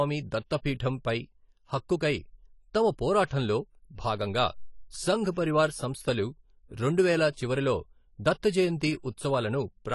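Throughout, the speech carries plainly audible AAC compression damage: nothing above 11.5 kHz, dull smeared sibilants with a fizzy warble, likely from AAC-LC at a low bitrate around 32 kbps.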